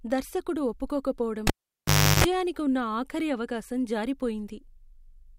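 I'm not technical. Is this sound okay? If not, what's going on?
No. Cable pulled and plugged in, 1.47 to 2.24 s, before "ఉన్న ఆఖరి అవకాశం": a pop, the speech cuts out, a 50 Hz hum while the plug half-touches, another pop.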